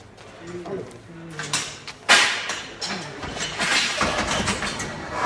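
No audible technical faults in this audio.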